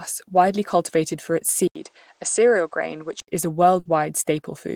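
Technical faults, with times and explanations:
1.68 to 3.28 s, input switched to a poorer device: Right after "widely cultivated for its", the sound goes dull, with nothing above 9 kHz, a brief gap of about 80 ms at the changeover, and a faint new background noise roughly 40 dB below the signal. Loudness stays much the same. The likely cause is capture moving to a narrower-band microphone or headset profile, with full bandwidth returning just before "is a".
3.79 to 3.88 s, burst of packet loss: Just after "is a", the last sound is stretched for about 60 ms and fades, because the receiver is extending what it last had to cover missing data. The audio then jumps ahead, skipping roughly another 60 ms. The stretch comes out as a held buzz or a fading hiss, depending on the sound being extended, and the skip is heard as an abrupt cut forward.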